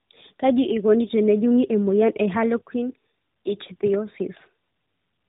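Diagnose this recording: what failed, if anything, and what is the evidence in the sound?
The codec stage failed. Tandem speech coding runs through the whole speech clip: it's rough, muffled and warbly throughout, with nothing above 3.8 kHz. That fits two AMR-NB passes with a G.711 hop between them, each coder re-encoding the last one's damage.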